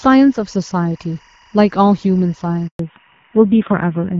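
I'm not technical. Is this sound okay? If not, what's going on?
No. A faint, steady chirping warble sits behind the speech the whole time. That is timecode bleed: a synchronisation signal leaking in, flipping between pitches around 1 and 2 kHz.

At 2.67 s the speech cuts out completely for 120 ms. This is a handover gap. The phone switched networks, and that moment of speech never arrived.

From 2.79 s to the end, the speech sounds duller and rougher. This is a fallback to narrowband. The call dropped from the clearer HD Voice to an older system, losing everything above 4 kHz.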